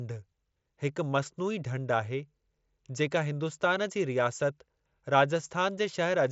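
No faults in this speech; the band stops near 7.7 kHz, which fits the mSBC wideband Bluetooth headset codec the audio passed through.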